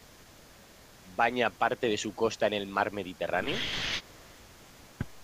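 A faint, delayed copy of the speech trails behind it from the start to 3.48 s, drops away briefly, then returns from 4.0 s to the end of the clip. The copy arrives about 0.24 s late and sits well below the speech itself. This echo leak is likely caused by a loudspeaker on the far end, where the echo canceller let part of what its microphone picked up slip through and sent it back.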